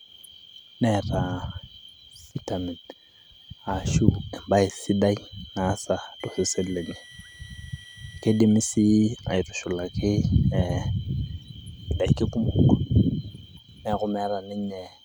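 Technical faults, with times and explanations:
6.20–8.39 s, switching supply whistle: after "embae sidai naasa", a switching power supply running in an audible burst mode or beating with another supply adds a faint whistle about 25 dB below the speech, wandering between 1.94 and 2.04 kHz. On a spectrogram it appears as a thin, slightly wavering horizontal line.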